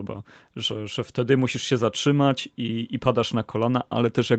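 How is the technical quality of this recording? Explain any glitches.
No glitches can be heard in this speech recording. It has passed through a call's microphone processing, which trims away the lowest bass and leaves nothing above 8 kHz, as that path normally does.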